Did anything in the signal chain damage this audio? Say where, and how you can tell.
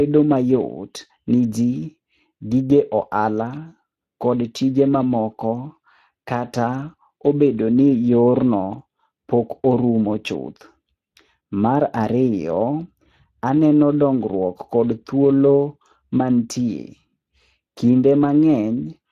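Yes. The damage comes from the codec stage, and it is Speex codec coding that persists through the whole speech clip. The speech sounds hoarse and grainy, with a noisy buzz laid over each syllable, which fits a rate near 22 kbps. A transform codec such as MP3 would smear transients or leave swirling, watery tones. This clip instead sounds like a speech model with too few bits for its excitation. Content ends near 15.3 kHz, but the upper band sounds like shaped noise rather than detail.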